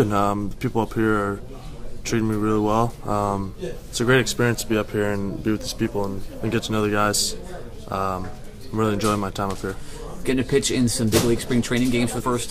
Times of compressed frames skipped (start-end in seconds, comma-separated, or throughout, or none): 12.19